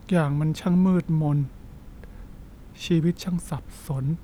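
No technical faults can be heard anywhere in the speech. There is no moment in the audio that needs a time mark or a technical explanation.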